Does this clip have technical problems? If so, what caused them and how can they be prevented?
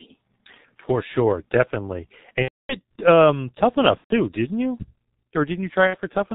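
Yes. The speech runs through the G.723.1 codec throughout, which fits about 6.3 kbit/s coding with heavy damage. Nothing above 4 kHz survives, and the slow 30 ms frame updates leave the voice muffled and hoarse, with smeared consonants. Prevent it by negotiating a wideband codec such as Opus or G.722.

VoIP packet loss concealed by the speech codec occurs at 2.42 to 2.75 s after "sure definitely", at 3.98 to 4.13 s before "didn't you", and at 5.87 to 5.97 s. In each gap the decoder repeats its last pitch and filter with falling gain, so the sound turns into a buzzy tone or coloured noise that fades, and recovery lags after audio resumes. The first gap points to about 270 ms of lost packets. Prevent it with a stable network path, QoS prioritisation and forward error correction.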